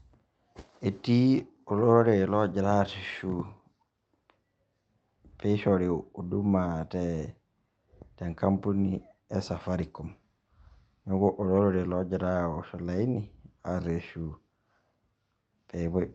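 No technical faults can be heard in the speech, which comes through a call codec and jitter buffer working as expected, with the top end stopping near 8 kHz in a way that fits Opus at about 32 kbps.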